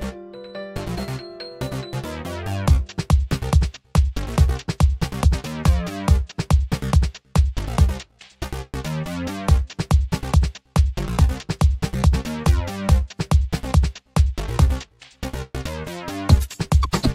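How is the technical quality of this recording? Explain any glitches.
One glitch stands out. A loud pop at 5.24 to 5.27 s: a sudden voltage pulse, likely from a plug, switch, static discharge or driver hiccup, is added to the signal and shaped by the circuitry after it. It comes through as a single sharp pop, roughly 10 dB above the surrounding sound, which carries on underneath.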